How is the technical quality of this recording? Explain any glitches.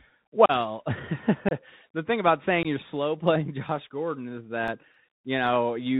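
Technical quality is rough: it's speech carried over a narrowband Bluetooth link, with a few dropouts and a burst of ticks near the end.

The whole clip has the sound of the Bluetooth CVSD headset codec. That's a one-bit-per-sample delta scheme at 64 kbps with an adapting step size, so nothing above 4 kHz gets through. Sibilants come out scratchy, loud bright moments distort, and there's a grainy hiss sitting under the speech throughout.

There are three short holes from unconcealed Bluetooth headset packet loss, at 0.46–0.51 s, 1.49–1.53 s (just before "thing about") and 2.63–2.67 s (right after "thing about", before "you're slow playing"). They're gaps of roughly 34, 26 and 19 ms where lost headset packets were swapped for silence, so the edges cut off abruptly and the speech comes back slightly dipped.

From 4.42 to 5.47 s there are five CD scratch ticks, so about five a second. Each tick is only a few milliseconds long. 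That rhythm fits a blemish hitting once per disc rotation: the player couldn't correct the damaged data and patched or muted the bad samples, leaving short regular clicks.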